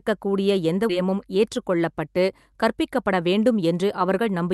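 At 0.89 to 0.91 s there is a skip ahead. Around 0.7 s of speech was thrown away while later audio was already queued, and playback jumps straight to it with no fill. It sounds like an abrupt splice. A waveform shows a hard seam with no silence, and the spectrogram shows a vertical discontinuity where the formant patterns change instantly.

From 2.69 s to 4.53 s a jitter buffer speed-up drains excess delay. The receiver cut out short pitch-period segments again and again, about 0.15 s in total, so the speech runs at 107% with unchanged pitch and sounds slightly rushed. On a spectrogram, harmonic spacing stays fixed while syllables compress horizontally. Throughout, the Opus call path's content stops near 12 kHz.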